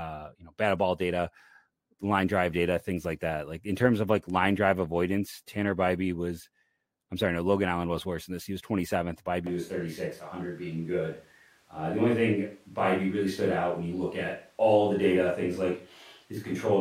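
From 9.47 s to the end, speech turns abruptly roomy and hollow, likely a switch to a distant microphone; spectrograms show thinner lows and smeared tails.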